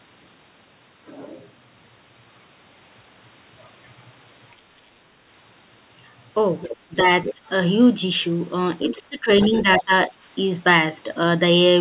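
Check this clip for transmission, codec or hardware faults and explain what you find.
Two echo-control faults occur in the second half of the speech, carried over a narrowband call path with nothing above 4 kHz, which fits G.711 mu-law at 64 kbps.

Other side's voice leaking through, 6.63–7.34 s, 8.88–9.02 s and 9.42–9.83 s: the echo canceller likely failed to fully cancel the far end's loudspeaker output picked up by the microphone. A second, fainter voice can be heard, roughly 10 to 15 dB below the talker.

Speech suppressed in double talk, 6.86–7.41 s and 8.91–10.11 s: with both sides talking, the echo control likely mistook the talker for echo and attenuated everything. The talker's level drops by up to about 20 dB in pieces, briefly in the first span and longer in the second.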